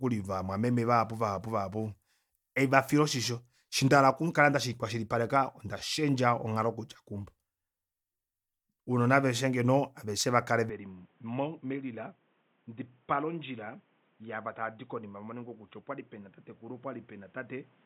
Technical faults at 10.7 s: input switched to a poorer device

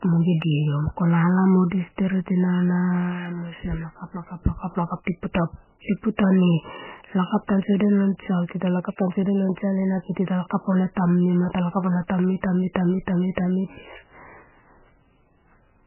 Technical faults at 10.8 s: MP3 compression; clock slip clicks

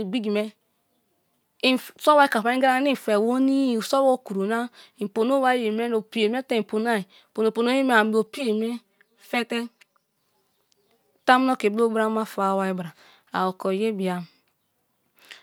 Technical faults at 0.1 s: none

